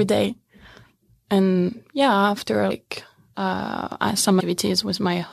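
At 1.67 to 1.69 s, 2.70 s and 4.39 to 4.41 s, compressed frames are skipped. The decoder drops about seven 23.2 ms frames each time, so the speech jumps ahead by about 200, 150 and 150 ms. Each join is a short smeared blip, seen as a soft vertical seam on the spectrogram and a sudden change of envelope in the waveform. At 3.92 s, a bit error spike across three samples gives one sharp tick. It shows as a lone needle in the waveform and a thin full-height line on the spectrogram.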